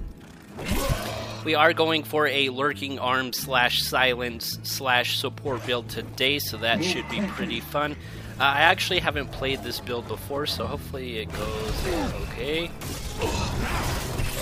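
No technical fault is audible anywhere in the audio, so there is nothing to time or attribute.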